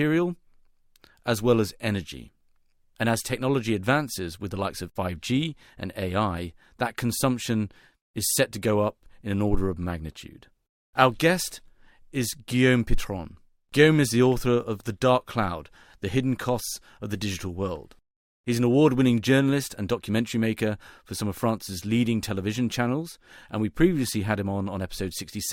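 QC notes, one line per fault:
No technical faults are audible in the speech recording; the signal stays continuous and stable throughout.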